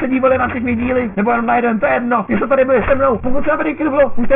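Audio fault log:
Throughout, aliasing. The sound has a harsh, gritty, metallic edge. Its spectrum runs hard up to a ceiling near 3 kHz, which points to the audio being dropped from 44.1 kHz to a 6 kHz rate without a low-pass filter first. Content above 3 kHz has nowhere to go, so it folds back below that edge as false, unrelated tones. That folded energy sits only about 15 dB under the wanted sound.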